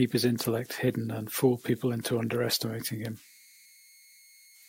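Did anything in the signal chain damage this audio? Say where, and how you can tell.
Yes: converter idle tones run throughout, a faint tone near 2 kHz about 29 dB below the speech. An undithered delta-sigma converter locks into repeating bit patterns, unlike fixed-frequency mains hum.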